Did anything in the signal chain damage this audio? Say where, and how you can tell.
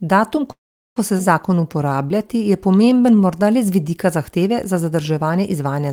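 Yes, at the network stage. From 0.51 to 0.98 s the speech freezes; a brief fading tail turns to silence before "ko se". It's likely a call audio freeze from late packets.

Right after "ko se", at 1.18 to 1.21 s, there's a skip ahead. About a third of a second of speech vanishes, and the two sides butt together almost seamlessly.

Between 1.49 and 3.45 s the speech drags at about 86% speed with unchanged pitch. That's a jitter buffer slow-down, repeating pitch periods to add 273 ms of reserve.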